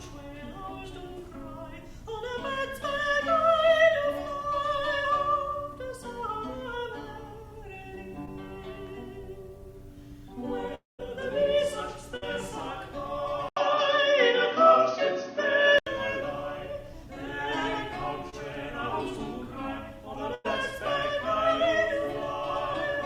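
At 8.25 to 8.29 s there is a short concealed packet loss. About 20 ms of audio arrived too late. The receiver extended the preceding sound to cover it. The result is a brief smear. The same fault returns at 18.30 to 18.34 s as a wobble.

From 10.75 to 11.01 s comes what is likely a long network dropout. Around 240 ms of audio is missing. The last sound carries on as a fading buzz or hiss. Then about 150 ms of silence follows before the audio resumes further along.

At 12.17 to 12.24 s a burst of packet loss removes about 60 ms. The sound is held and turned down, then jumps ahead. A second burst at 20.34 to 20.46 s drops about 100 ms, heard as a longer fading hold.

Between 13.49 and 15.87 s the input appears to switch to a poorer device. There is an 80 ms silence at the switch. After it, nothing remains above 6.4 kHz, so the sound turns dull. The level shifts by a few decibels. A new noise floor sits roughly 50 dB below the signal.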